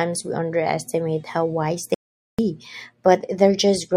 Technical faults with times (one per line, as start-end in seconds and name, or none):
1.94-2.39 audio dropout to silence